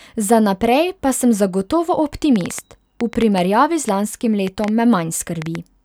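From 2.36 s to 5.56 s a train of clicks runs over the speech: around fifteen near-identical sharp pulses at an uneven pace averaging 4.7 per second, peaking roughly 10 dB above the signal and audible in pauses. Likely cause: nearby interference or a struggling interface.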